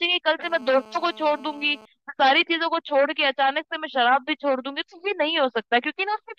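Speech with GSM phone buzz from 0.43 to 1.86 s: a nearby 2G phone on a call pulses at about 217 Hz, which the audio circuit rectifies into a steady, raspy buzz about 24 dB below the speech. A spectrogram shows evenly spaced horizontal lines at 217 Hz and its harmonics, and the waveform shows regular spiky pulses.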